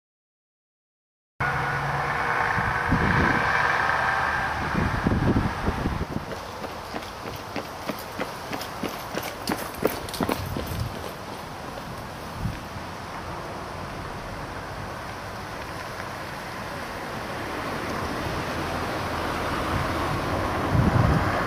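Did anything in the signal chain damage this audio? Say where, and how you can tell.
Yes. A cut-off start: the file holds digital silence until 1.41 s, then the sound enters mid-stream with no attack or fade. Capture or the stream began late, so the opening of the sound was never recorded, which points to the recording or storage stage.

Frames out of order at 1.52–1.72, 3.60–3.80, 6.03–6.29, 14.10–14.23, 17.65–17.91 and 20.34–20.53 s. Each is a garbled flutter where two adjacent blocks of 64–128 ms play swapped, which fits runs of two to four 32 ms frames reordered in network delivery. No time is lost.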